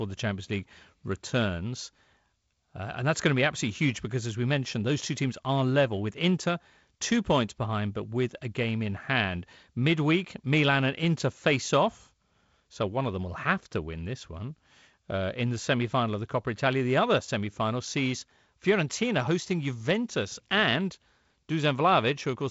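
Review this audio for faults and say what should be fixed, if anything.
Nothing here needs fixing; what you hear is ordinary G.722 wideband telephone coding at 48 kbit/s, with the audio stopping short of about 7.7 kHz and a touch of the light coding texture you'd expect at that rate.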